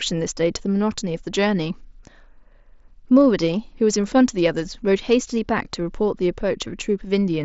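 Nothing stood out on listening to this speech clip, which comes over the Bluetooth mSBC headset link with its usual wideband limit near 7.7 kHz.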